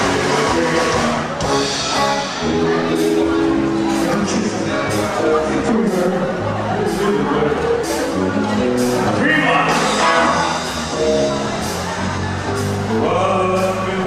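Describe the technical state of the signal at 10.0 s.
At 10.0 s the audio is intact, with no dropout, distortion, glitch or other fault to be heard.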